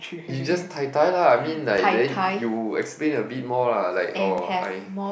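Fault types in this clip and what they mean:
Block of digital silence: samples drop abruptly to silence for 6 ms at 1.77 s and 2 ms at 4.38 s, heard as ticks; flat waveform gaps, broadband click lines.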